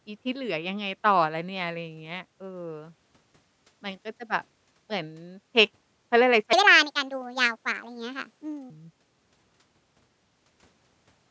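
From 6.53 to 8.70 s a section at the wrong speed plays back, most likely because that stretch was fitted to the wrong clock and run 1.57 times faster than it was recorded. Speed and pitch rise together, so the speech suddenly turns hurried and lifts by about seven semitones, sounding thin and chipmunk-like, then drops back to its natural rate and pitch. The call microphone processing stays the same throughout, taking out only the lowest bass.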